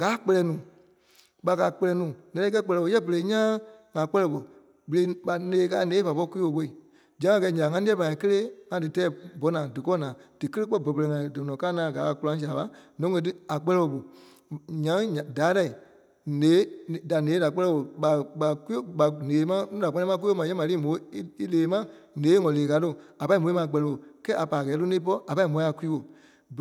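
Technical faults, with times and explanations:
Nothing technical stands out in this speech recording; it's free of any faults worth flagging.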